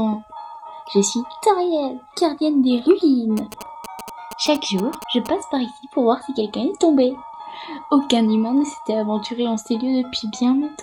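A galloping dit-dit-dit of short 217 Hz buzzes runs from 3.37 to 5.27 s, not far below the audio: GSM signalling bursts from a nearby 2G phone, rectified by the circuitry.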